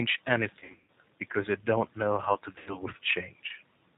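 Throughout, the speech carries plainly audible G.729 codec damage, consistent with an 8 kbit/s G.729A stream. The sound is rebuilt from a vocal tract filter, a pitch predictor and sparse pulses, so it comes across rough and faintly synthetic. On a spectrogram, energy stops sharply at 4 kHz.

From 0.60 to 0.89 s, VoIP packet loss concealed by the speech codec breaks the speech. About 220 ms is missing, scattered over roughly 280 ms, with the longest gap about 120 ms. For each gap, the decoder extends its last pitch and filter at falling gain, which stretches the sound into a buzzy tone or coloured noise that fades. The waveform shows an envelope that shrinks in amplitude. The spectrogram shows a flat, stretched spectrum instead of moving formants, and the speech stays weak or distorted just after the gap.

The same concealment returns from 2.58 to 2.78 s. About 80 ms is lost, heard as a shorter stretched stretch that fades, with the voice weak or distorted just after. 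It looks the same as the first event, with a frozen spectrum and a decaying envelope.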